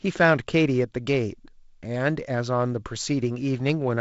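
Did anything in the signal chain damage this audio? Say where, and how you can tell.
No, nothing in the signal chain damaged this speech.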